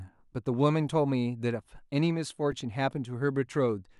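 At 2.52 s a repeated buffer occurs: fresh audio arrived late, so the same tiny slice, about 2.9 ms and consistent with a 128-sample buffer, replays three extra times. It sounds like a brief buzzy click, not a gap, since essentially no sound goes missing.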